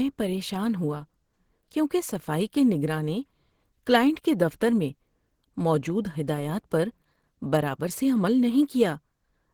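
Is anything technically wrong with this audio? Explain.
Yes. Opus compression damage runs throughout. The speech sounds muffled, hoarse and grainy. The likely cause is the low-rate hybrid speech mode, fitting roughly 16 kbps.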